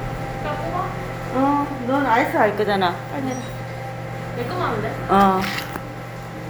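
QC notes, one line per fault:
No faults found in this clip. Nothing needs flagging for correction.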